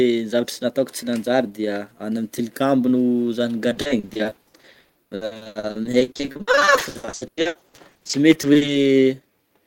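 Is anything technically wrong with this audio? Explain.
Yes. From 3.69 s to 8.69 s the speech suffers repeated packet loss, heard as a robotic sound. Dozens of short holes open in quick succession, none longer than 100 ms, and each is papered over by stretching the sound that came just before it, so nearly half of that five-second stretch is concealment rather than real audio. The result is choppy, with pieces missing. A single dropout gives one isolated break, but here the gaps keep recurring and the fill keeps repeating stale sound.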